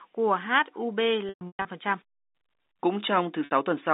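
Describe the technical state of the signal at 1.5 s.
Packet loss with pitch repetition, 1.29 to 1.65 s: scattered gaps, longest 120 ms, are filled by repeating the last pitch period, giving a buzzy held tone that fades rather than cutting to silence.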